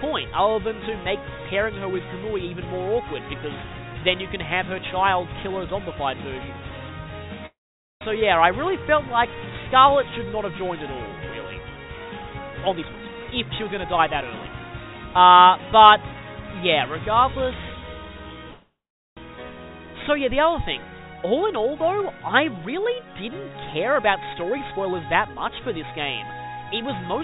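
At 7.46 s the sound stops moving forward. A brief buzzy continuation of the last sound fades out, and about 0.47 s of silence follows. The audio resumes at 8.03 s exactly where it left off. This is a call audio freeze. Packets were likely held up in transit, so the jitter buffer ran dry and the receiver had to fill the wait. About 0.55 s of gap was inserted and nothing was lost.

From 12.72 to 14.95 s the audio hurries along at about 125% speed with its pitch unchanged. This is a jitter buffer speed-up. The buffer had grown too deep, so the receiver trimmed many short pitch-period slices in a row. Roughly half a second was cut here.

At 18.51 s a second call audio freeze sets in. Again a short fading buzz gives way to about 0.42 s of silence. Playback picks up at 19.19 s with nothing missing. This time about 0.65 s of extra delay was added.

From 21.14 to 22.11 s another jitter buffer speed-up runs at about 108%. 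It is a gentle rush that removes about a tenth of a second.

From 23.94 to 25.94 s a stronger one runs at about 122%. It drops roughly 0.4 s and sounds clearly hurried.

Throughout, the band stops at 4 kHz, which fits narrowband G.711 mu-law at 64 kbps on the call path.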